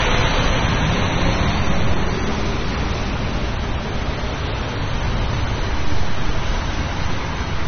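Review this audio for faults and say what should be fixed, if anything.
AAC compression, throughout the clip: the audio stops dead at about 6.3 kHz, with nothing above it, and the damage is plainly audible as a dull, smeared sound with a watery, fizzy texture where the spectrum thins out. This is likely the work of an AAC-LC encoder starved of bits, which fits a rate around 24 kbps. It lowered the cut-off and coarsely quantised the remaining bands. To prevent it, encode from the original source at a much higher bitrate or in a lossless format.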